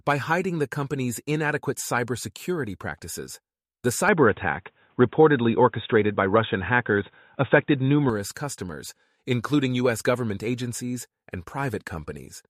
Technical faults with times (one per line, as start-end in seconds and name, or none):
4.09-8.09 input switched to a poorer device